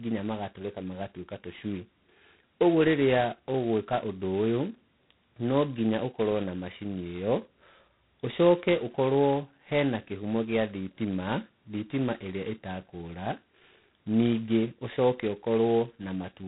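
The speech was coded as G.726 ADPCM at a bit depth that fits 16 kbit/s, leaving a harsh, level-following rasping hiss throughout and nothing above 3.9 kHz.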